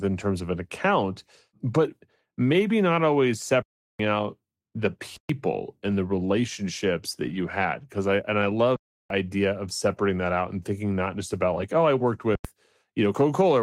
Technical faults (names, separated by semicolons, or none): lost packet rebuilt from error correction; underrun with held sample